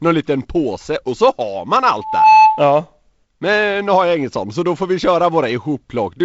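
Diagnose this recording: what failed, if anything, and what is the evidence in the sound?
Loudspeaker feedback squeal from 2.0 to 2.68 s: the mic picks up its own speaker, so an 870 Hz tone swells within about a third of a second to roughly 10 dB over the speech.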